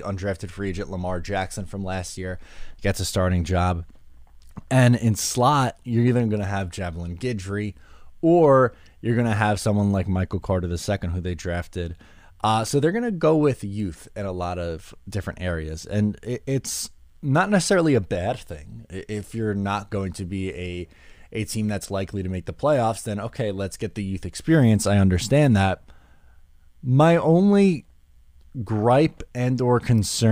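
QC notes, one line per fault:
No technical faults are present anywhere in the signal.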